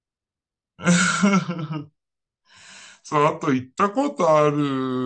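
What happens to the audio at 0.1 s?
At 0.1 s the speech is already affected by a wrong sample rate, which runs through the whole clip. Playback runs at about 0.69 times the intended speed, which fits 32 kHz material played at 22 kHz, so the voice is slow and dropped about 6.5 semitones.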